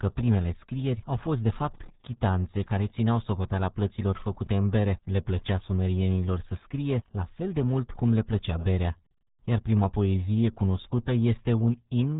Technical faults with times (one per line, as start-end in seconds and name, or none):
0.00-12.20 RealAudio 14.4 codec